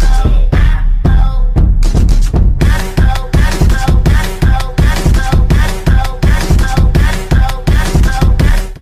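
Sample clock jitter runs through the whole clip: the converter's timing wanders by a few microseconds, so each sample lands a little early or late, and the error is largest wherever the waveform changes fastest. It sounds like a grainy hiss riding on the loudest, brightest passages, some 40 dB below the signal, and it disappears in the gaps. On a spectrogram a diffuse noise haze appears under strong high-frequency energy, and the waveform's quiet stretches stay clean.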